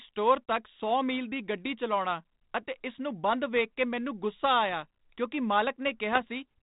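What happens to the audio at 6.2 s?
Bit errors on an ADPCM link hit from 6.12 to 6.21 s. Flipped bits upset the decoder's step size and predictor, so pops and rough, level-jumping bursts ring on briefly, showing as broadband vertical streaks and spiky waveform excursions.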